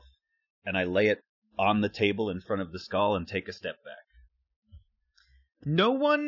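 A speech recording, with nothing technically wrong with it.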